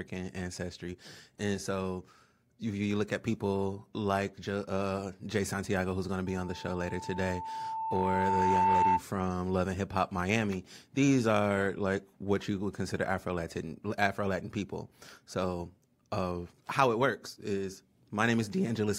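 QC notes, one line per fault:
6.26–9.03 s, loudspeaker feedback squeal: a single 889 Hz tone swells over roughly two seconds into a squeal sitting about 5 dB above the speech. The microphone is picking up its own loudspeaker, and at that frequency the loop gain exceeds one, so the tone keeps reinforcing itself.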